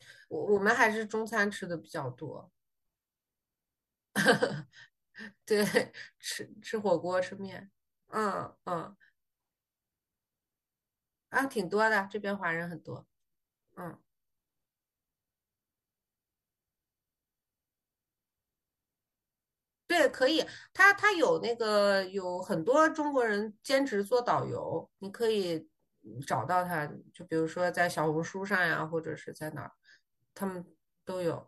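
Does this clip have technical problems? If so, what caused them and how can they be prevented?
No, nothing in this speech recording stood out as a technical problem on listening, so there is no cause to trace or prevent.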